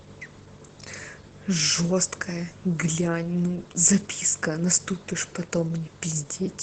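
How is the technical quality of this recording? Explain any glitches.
The quality is limited by heavy Opus voice compression throughout. A SILK-mode coder squeezes the speech into wideband, cutting above 8 kHz and coding the excitation coarsely, likely near 12 kbps, leaving it muffled, hoarse and faintly robotic.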